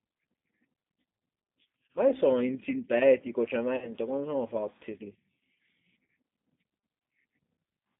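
Throughout, the speech sounds slightly rough and synthetic, with nothing above about 3.7 kHz and little below 150 Hz. This is the G.729 codec, plainly audible here. The character fits its 8 kbit/s form: each 10 ms frame is rebuilt from a vocal tract filter, a pitch predictor and a handful of pulses rather than from the waveform itself, so fine detail and the top of the spectrum are lost.

At 1.03 to 1.05 s a brief stretched smear replaces the speech, about 20 ms long, which fits a single lost packet. At 3.76 to 3.93 s a longer drawn-out sound fades away, with about 60 ms missing, consistent with three packets in a row. At 6.09 s a short stretched patch covers about 40 ms. Each is VoIP packet loss concealed by the speech codec. The decoder keeps extending its last pitch and filter while lowering the gain, and because every frame builds on the previous one, the speech stays weakened for a moment after real packets resume.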